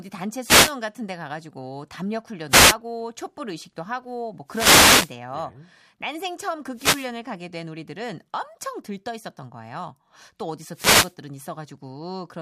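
Speech with five wireless microphone noise hits, at 0.41–0.77, 2.49–2.76, 4.47–5.16, 6.73–7.13 and 10.71–11.15 s. Each is a brief static swish as the FM radio link fades and receiver noise rises over the voice. A spectrogram shows broadband vertical noise bands, and the waveform shows thickened, fuzzy stretches.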